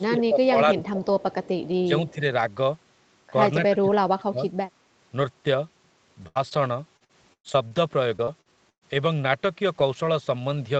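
A speech recording carried over an Opus call at 40 kbps, with its spectrogram topping out at 8 kHz, shows two groups of faults: echo-canceller trouble in the first 4.4 s, then network packet loss from 6.27 s onward. Speech suppressed in double talk appears from 0.0 to 1.05 s, with roughly 0.7 s of that stretch turned down by about 15 dB. Brief, shallower dips of about 5 dB follow at 1.86–1.9 s and 2.13–2.21 s, and the deepest one, about 30 dB, runs from 3.68 to 4.41 s. When both ends talked at once, the canceller likely could not tell the near talker from the loudspeaker return and attenuated everything. On a waveform these show as sudden sags in the envelope, and on a spectrogram as faded, thinned bands where the speech energy should be. Echo leak shows up at 0.85–0.89 s, 1.2–1.49 s and 2.08–2.13 s as a faint copy of the speech trailing it by 187 ms, about 25 dB below the speech (about 30 dB for the last one). 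The far end's canceller likely left residue that was sent back. On a spectrogram it looks like a ghost of the harmonic pattern shifted right by that delay. A burst of packet loss at 6.27–6.38 s leaves about 80 ms of concealment and 60 ms of speech simply missing, with a 20 ms shift in playout timing. The last sound is stretched into a decaying buzz or hiss, so the spectrogram shows smeared, repeating harmonics fading toward the gap and then an abrupt jump in content. Inside it, at 6.35–6.37 s, a 20 ms lost packet was rebuilt from error correction: Opus in-band redundancy supplied a low-bitrate copy. Another 20 ms frame was rebuilt the same way at 6.51–6.53 s. These frames sound rougher and noisier, and on a spectrogram appear as short patches of grainier, less defined texture with no gap. Short concealed packet loss at 6.49–6.54 s fills about 14 ms and drops 20 ms. The last sound is extended and then cross-faded back, heard as a brief smear or wobble and visible as a tiny discontinuity in the waveform. 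Repeated packet loss (robotic sound) hits 6.97–7.73 s with five gaps, the longest 112 ms, concealing about 30% of the span. It hits again at 8.17–8.84 s with four gaps, the longest 118 ms, concealing 31%. Each hole is patched from the preceding sound before the next arrives, giving a choppy quality with pieces missing, with some frames recovered from redundancy. The spectrogram shows a stutter of frozen, periodic stripes alternating with real speech.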